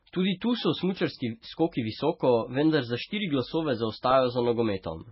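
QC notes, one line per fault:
Throughout: MP3 compression, likely the cause of the heavy codec damage heard across this speech. Nothing is present above 5.6 kHz, a fixed treble cut-off that dulls the top of the sound. The remaining band has a watery, swirling quality because weak frequency lines drop out and return from frame to frame when bits run short, and consonant attacks are smeared. The extent of the damage points to a very low bitrate, around 16 kbps.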